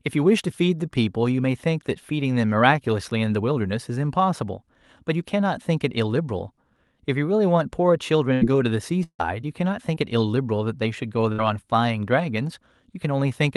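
At 8.33 to 8.43 s comes a burst of packet loss: roughly 80 ms of the speech never arrived, and the receiver continued the last sound, dimming it before the audio resumes further on. On a spectrogram the frozen content runs flat and unchanging, then jumps abruptly to different content; in the waveform a repeating, shrinking cycle pattern sits at the join. The same happens at 11.32 to 11.40 s, where about 60 ms of concealment covers a similar amount of lost audio.

Between 9.03 and 9.21 s the last sound continues and fades, then falls to near silence for about 70 ms before the speech returns with a portion missing. This is likely a long network dropout, in which nothing reached the receiver and its concealment ran out. In the waveform this appears as a decaying, periodic tail ending in a nearly flat line. On a spectrogram the frozen content blurs and fades into an empty band before normal content restarts.

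At 9.95 s a short concealed packet loss leaves a brief smear where about 20 ms never reached the decoder in time. The receiver extended the preceding sound for a few milliseconds and blended it back into the real signal, so it is heard as a tiny wobble. On a spectrogram this shows as a thin vertical seam of smoothed or slightly smeared energy. The waveform shows a small discontinuity in the cycle shape.

Throughout the clip, the spectrum stops near 12 kHz, which fits the Opus call path.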